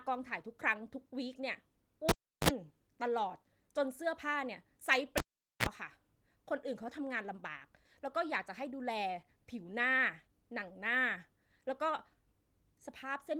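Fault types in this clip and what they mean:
Cable pulled and plugged in: a live lead is yanked and reinserted, so the sound pops, drops to near silence for 0.35 s at 2.09 s and 0.44 s at 5.18 s, then gives a brief mains buzz (50 Hz, then 60 Hz) before a second pop.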